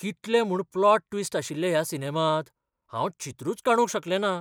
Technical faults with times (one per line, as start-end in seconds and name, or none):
none